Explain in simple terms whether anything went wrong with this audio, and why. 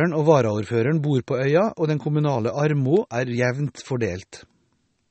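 The recording was likely squeezed hard by MP3 compression, which saves space by discarding detail the encoder judges unimportant. Here nothing above 8.4 kHz survives, so the speech sounds dull and watery throughout, with swirling, metallic edges on hissy sounds like s.

At 2.97 s, between "den kommunale" and "er jevnt", a nearby switch or static discharge likely arced and leaked into the audio line. That is an electrical switching spike, heard as a sharp snap sitting on top of the speech.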